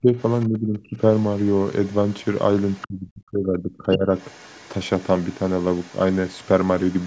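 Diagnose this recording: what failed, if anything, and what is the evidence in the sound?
The speech is suppressed in double talk, at the call-processing stage. The talker's speech dips sharply at 0.0–0.09 s, 0.49–1.0 s and 2.86–4.08 s, by roughly 20 to 30 dB at worst. The echo canceller likely mistook both voices for echo and turned everything down.

The other side's voice is leaking through at 0.2–0.46 s, 1.12–2.36 s, 2.59–2.87 s, 4.18–4.69 s and from 4.97 s to the end. It sits far below the speech, but is clearly louder around 2.6–2.9 s. This is likely residual loudspeaker echo the canceller failed to remove.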